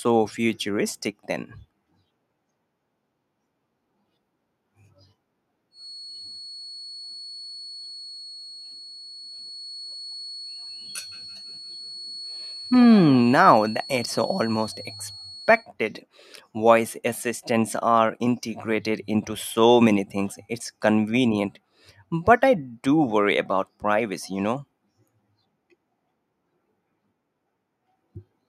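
From 5.70 to 15.69 s there's a thin, slowly swelling and fading feedback whistle at 4.4 kHz, around 20 dB under the speech, likely a speaker-to-mic loop hovering right at the edge.

Between 9.83 and 13.32 s you get feedback echo between two devices: the speech comes back roughly every 150 ms, peaking about 20 dB below the original.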